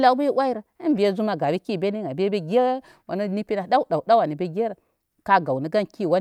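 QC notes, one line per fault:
No technical faults were found, and the speech is intact for its entire duration.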